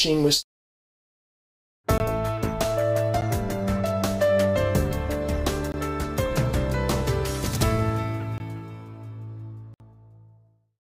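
Blocks of digital silence drop in at 1.98–2.00 s, 3.21 s, 5.72–5.74 s, 8.38–8.40 s and 9.74–9.80 s. The sound cuts out abruptly, likely from late buffer fills. The 60 ms gap is heard as a brief hole.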